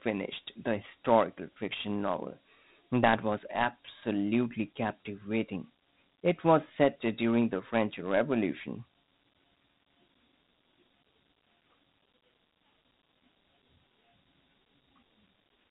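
Throughout, Dialogic VOX ADPCM coding, which fits 32 kbps, removes everything above 3.9 kHz and leaves a plainly audible gritty hiss following the speech.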